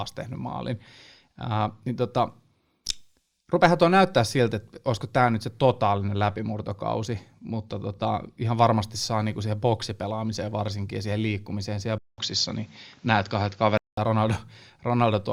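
A speech clip in which, from 11.98 s to 13.97 s, the sound turns duller, with nothing above 7.6 kHz, a small shift in level of about 5 dB and a faint new background noise, after a 200 ms silence at the switch. The likely cause is the input switched to a poorer device. A plain low-pass filter or codec bandwidth drop would narrow the band alone. Here the gap, the changed noise floor and the level shift arrive together, pointing to different hardware.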